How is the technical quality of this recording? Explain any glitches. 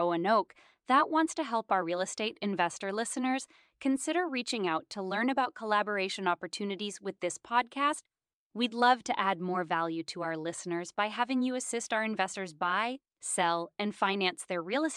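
No glitches or technical faults are audible anywhere in the recording.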